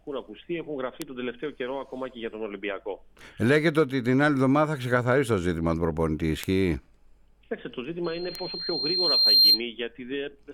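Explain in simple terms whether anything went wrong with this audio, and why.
Three bit error spikes, at 1.02, 6.44 and 8.35 s, each a single sharp tick: one flipped bit briefly throws a sample far off before it snaps back. From 8.04 to 9.61 s a loudspeaker feedback squeal appears. The microphone picks up its own speaker, and a tone near 4.2 kHz builds over about a second and a half until it is well above the rest of the sound.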